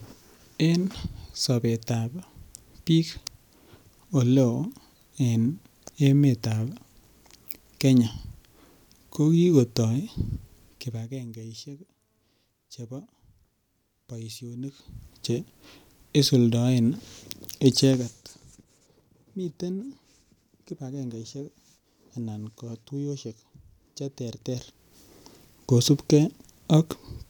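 Zipper noise runs from 14.57 to 15.08 s, as the speech level moves by around 15 dB. The gain changes in unsmoothed 1 dB steps, roughly fifty a second, so each step clicks and together they make a rapid zipping tick over the sound.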